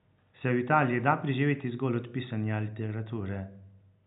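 No technical faults are present.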